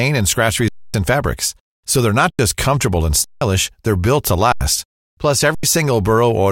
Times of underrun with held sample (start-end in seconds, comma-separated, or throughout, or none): 0.68-0.94, 2.30-2.39, 3.24-3.41, 4.52-4.61, 5.55-5.63